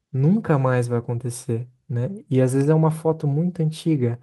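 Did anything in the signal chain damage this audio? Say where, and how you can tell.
No, nothing in the signal chain damaged this speech recording. I hear no mark from any stage, from the wiring and converter through to playback.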